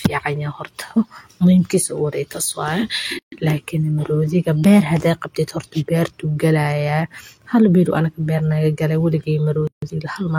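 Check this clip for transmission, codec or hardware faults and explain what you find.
Two dropouts of the same kind turn up in the speech. Gap at a join of encoded pieces, at 3.19 to 3.32 s (133 ms) and 9.67 to 9.82 s (150 ms): separately encoded pieces kept their start delay and end padding, so smeared silences cut in before the speech resumes.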